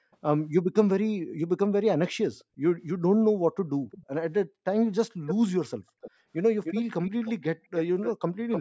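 Faint delayed copies of the speech, about 40 dB down and roughly 350 ms late, appear at 0.12 s and 2.39 s. This is echo leak, likely caused by a loudspeaker on one side whose echo canceller let part of its own playback slip back into the microphone. On a spectrogram it shows as ghostly formant traces trailing the main speech.

From 1.2 to 1.4 s and from 2.46 to 2.63 s, the background is gated by the echo canceller. It clamped the microphone while the loudspeaker played, so room noise falls by about 40 dB for a fifth of a second or less. This shows as a near-blank notch in the noise floor and a flattened gap in the waveform.

The echo leak returns at 3.91 s, 5.26 s and 6.01 s, then runs continuously from 6.64 s to the end. The delay is still about 350 ms at 3.91 s and about 300 ms from 5.26 s on, and the echo sits only about 10 to 25 dB below the speech. On the spectrogram this appears as repeated harmonic stripes offset in time, all within the call's 8 kHz band.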